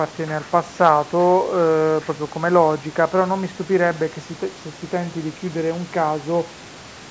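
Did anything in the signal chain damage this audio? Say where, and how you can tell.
No, nothing in the signal chain damaged this speech; it only passed through a call's microphone processing, which trims the lowest bass and leaves nothing above 8 kHz, as expected.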